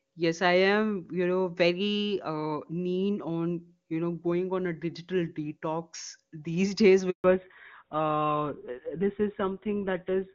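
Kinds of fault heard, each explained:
handover gap: At 7.1 s the speech breaks off within a few tens of milliseconds and stays silent for 140 ms, until 7.24 s, while the call is passed from one network to another and no speech frames get through. Unlike packet loss concealment, nothing fills the hole: there is no smeared, buzzy or repeated fragment, only clean silence. The speech that resumes also sounds different from the speech before the break.
fallback to narrowband: From 7.24 s to the end, everything above 4 kHz is gone. The speech turns duller and rougher as the call drops from HD Voice to an older narrowband codec, and the sound points to GSM full rate at 13 kbit/s. Before the switch, the clear wideband sound carries content up to about 7 kHz. A simple low-pass filter or a muffled microphone would only take away treble. Here the change is abrupt, comes right after the gap, and adds coding roughness.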